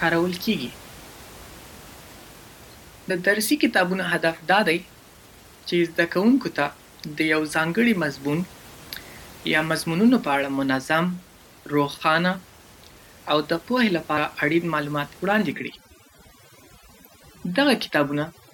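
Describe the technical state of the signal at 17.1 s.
At 17.1 s you're in a stretch of overdone noise removal running from about 15.52 s to the end at 18.53 s. The denoiser is cutting bands that sit near its noise estimate, so the room noise, about 24 dB under the speech, drops and breaks up into twinkly specks.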